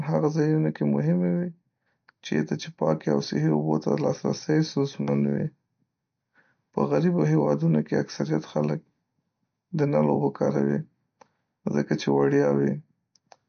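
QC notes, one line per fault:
Throughout, MP3 compression: the speech sounds watery and swirly, with smeared onsets and nothing above 6.5 kHz. This is likely a low-bitrate MP3 encode, fitting about 48 kbps, where the encoder cuts the treble and flickers weak frequency lines between frames.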